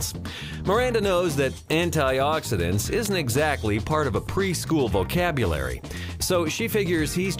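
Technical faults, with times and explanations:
3.05 s, electrical switching spike. A sharp, brief snap sits on top of the sound, peaking near -10 dBFS. A nearby switch or discharge arcing is the likely cause.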